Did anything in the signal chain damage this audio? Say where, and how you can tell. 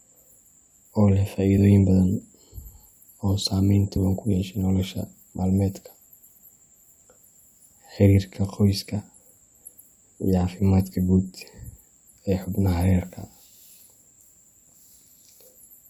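Yes, at the codec: damaged data in the compressed stream gives brief blips at 1.57 s after "oo leh", 3.96 s after "oo saameyn" and 12.44 s, as the decoder loses frame sync.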